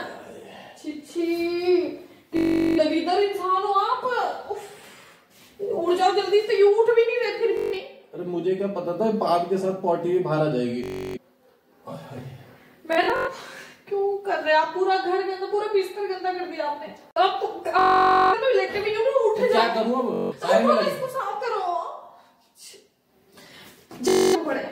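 Bluetooth stutter strikes at 2.37–2.79, 7.57–7.80, 10.84–11.18, 12.93–13.29, 17.79–18.34, 20.14–20.33 and 24.08–24.36 s. Lost packets make the receiver replay its last slice, which fits roughly 21 ms frames, as a machine-gun buzz. Spectrograms show identical repeating stripes. Waveforms show one short cycle tiled, then a jump ahead.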